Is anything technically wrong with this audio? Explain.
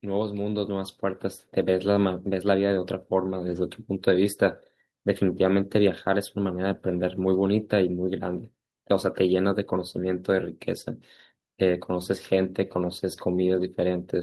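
Yes, there are two faults. From 0.05 to 1.31 s there is automatic gain rising: the gain control judged the input too quiet and raised its level by about 6 dB. Speech and background swell together, and the waveform envelope visibly widens across that stretch. From 3.47 to 3.57 s there is a lost packet rebuilt from error correction: the decoder played the low-bitrate copies carried in following packets, covering about 60 ms, which fits three lost 20 ms packets. There is no gap, but the sound turns rougher and noisier, with smeared, grainier texture on a spectrogram.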